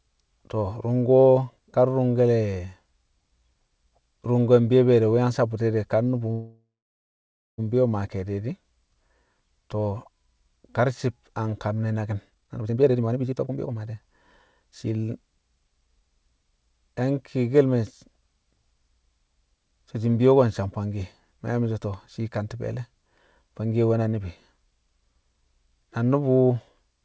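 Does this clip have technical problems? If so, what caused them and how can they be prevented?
Yes. Between 6.32 and 7.60 s the speech stops and a call audio freeze is heard. The most likely cause is delayed packets draining the jitter buffer. For about a third of a second the receiver extends the last sound as a fading buzz, and then it goes silent for about 0.92 s. Speech resumes where it left off, so nothing is lost, but the later audio arrives about 1.26 s late. On a spectrogram this appears as smeared, repeated harmonics that fade into a blank band. On the waveform it is a decaying, repetitive stretch followed by flat silence. It can be prevented by giving the network path steadier capacity or priority, so packets are not held back long enough to empty the buffer.

Two passages show jitter buffer speed-up. From 12.29 to 14.11 s the speech runs at about 164% speed, because the receiver has cut out roughly a second of audio in many pitch-period slices to reduce the backlog. 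From 14.52 to 16.01 s there is a milder 106% speed-up that removes about a tenth of a second. The pitch stays the same while the pace sounds hurried. A spectrogram shows compressed syllables with the harmonics at unchanged heights, and the waveform shows tightly packed cycles. This can be avoided by letting the buffer drain more gradually after a burst.

Nothing above 8 kHz is heard, which fits a wideband call codec such as G.722.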